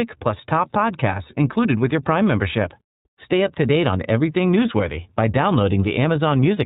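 From start to finish the speech passes through the iLBC codec, a narrowband VoIP coder that drops everything above 4 kHz, so it sounds dull and telephone-like. Each 30 ms frame's excitation is coded independently, which fits a rate near 13.33 kbps. It leaves a plainly audible rough, slightly synthetic edge.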